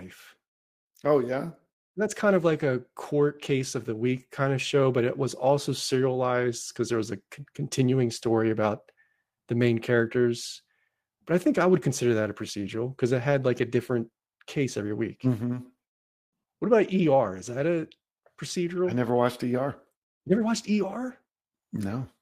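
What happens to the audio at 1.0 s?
Nothing goes wrong at 1.0 s; the speech there plays through intact, with no dropout, click or distortion.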